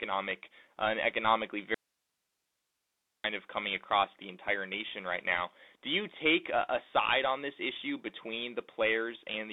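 Throughout, the speech carries Bluetooth CVSD headset codec damage. The band runs from about 250 Hz to 3.7 kHz, with nothing above 3.8 kHz. S sounds turn scratchy over a granular hiss.

From 1.74 to 3.24 s, after "uh an economically", there is an audio dropout to a faint residue. About 1.5 s is lost. Only hiss remains, roughly 50 dB down. It returns abruptly at "of coming across the". A likely cause is a broken link while the path stayed live.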